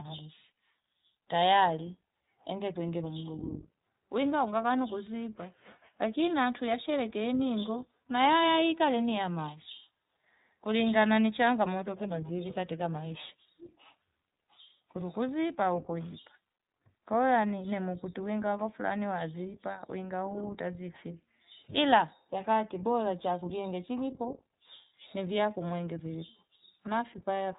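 Throughout, the iLBC codec codes each frame independently, consistent with 20 ms frames. Nothing above 3.8 kHz survives, and the speech sounds plainly rough and synthetic.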